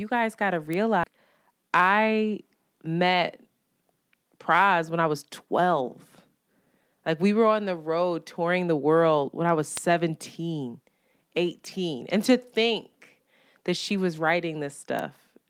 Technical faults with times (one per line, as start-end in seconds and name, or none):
0.73 bit error spike
1.03-1.05 skip ahead
1.17-1.89 jitter buffer speed-up
9.77 bit error spike
14.99 bit error spike